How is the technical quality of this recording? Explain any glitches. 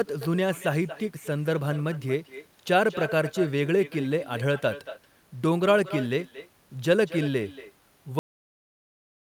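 The recording has two clear technical problems: a constant echo of the talker and an abrupt cut-off before the end.

Echo with no canceller runs through the whole clip. The far end's microphone picks up its loudspeaker and sends the speech back, about a fifth of a second late and about 15 dB quieter and thin. Because it is a distinct delayed repeat rather than a smeared tail, it is not room reverberation.

A cut-off end hits at 8.19 s. The final buffers were never written, so the speech stops mid-sound and drops straight to digital silence for the rest of the clip. The complete lack of decay separates it from a fade-out or a natural pause.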